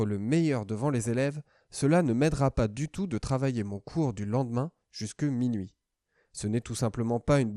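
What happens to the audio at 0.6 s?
MP2 compression artefacts are present at 0.6 s, as they are throughout the speech. The likely cause is MPEG Layer II coding at a starved bitrate, which fits a rate around 80 kbps. Each of the 32 sub-bands gets too few bits, so upper bands drop out and flicker while the remaining ones are coarsely quantised. The result is a dull, muffled top end with a plainly audible gurgling, granular roughness.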